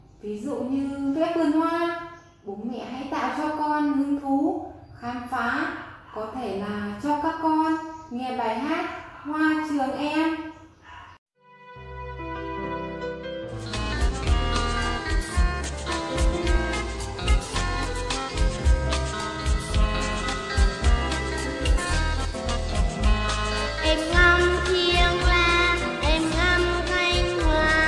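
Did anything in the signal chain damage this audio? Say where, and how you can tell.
No, nothing in the signal chain stood out as having damaged this audio when I listened to it.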